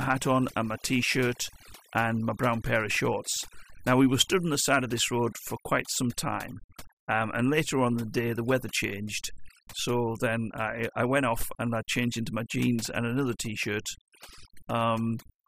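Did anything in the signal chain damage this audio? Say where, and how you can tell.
Yes, overdone noise removal hits this speech clip throughout, at the call-processing or cleanup stage. The background drops and breaks up into twinkly specks. The denoiser was set too hard, so it gates bands sitting near its noise estimate and takes quiet voice detail with them.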